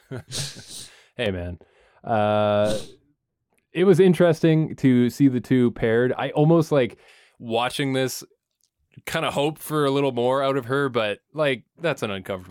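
From 1.26 s to 7.08 s, up to just before "watching this", the speech turns dull and muffled because de-emphasis was applied wrongly: a treble cut meant to reverse pre-emphasis hit audio that never had it, or was applied a second time. The high end tilts down gradually, about 11 dB lower at 10 kHz than at 1 kHz. Unlike a low-pass filter, there is no abrupt cutoff; the treble fades smoothly rather than vanishing above one frequency.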